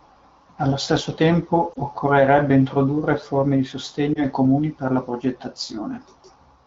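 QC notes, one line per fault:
1.73–1.76 s and 4.14–4.21 s: lost AMR speech frames. Each time one 20 ms frame fails, and the AMR-WB decoder reuses the previous pitch and vocal tract settings at falling gain, giving a brief dip or warble. Waveform shows a short amplitude sag; spectrogram shows momentarily frozen, smeared harmonics.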